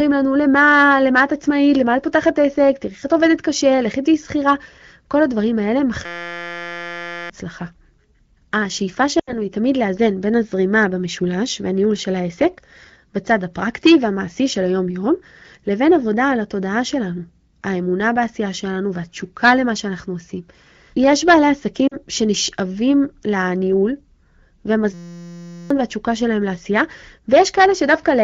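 A speech recording carried over AMR wideband (HD Voice) shows two kinds of fault. In a system hang loop, the driver froze while the sound hardware kept replaying one 5.8 ms piece of its ring buffer, which fits a 256-sample buffer. The result is a steady 172 Hz buzz from 6.06 to 7.30 s and from 24.94 to 25.70 s, replacing around a second and a half and under a second of speech respectively. Lost AMR speech frames, where frames failed their checksum over the radio link, made the decoder reuse the last good pitch and vocal tract settings at falling gain. This smears and dips the speech from 9.19 to 9.41 s, concealing 80 ms, and briefly at 21.87 to 21.96 s, concealing 40 ms.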